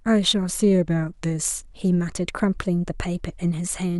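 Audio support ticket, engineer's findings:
No audible defects found in the speech signal; no dropouts, level anomalies or timing faults to report, so no component is implicated.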